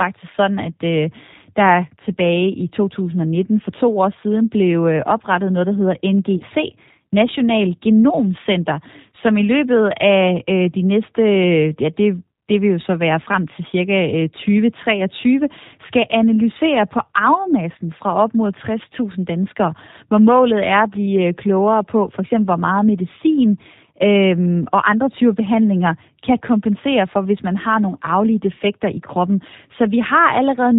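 G.729 codec coding at 8 kbit/s runs throughout this speech recording, rebuilding it from a vocal tract filter and sparse pulses, so nothing above 4 kHz survives and the voice sounds plainly rough and synthetic. VoIP packet loss concealed by the speech codec occurs at 6.37 to 6.43 s, where about 30 ms of audio, which fits a single lost packet, was filled in from the previous pitch and filter, leaving a brief, fading patch before the voice recovers.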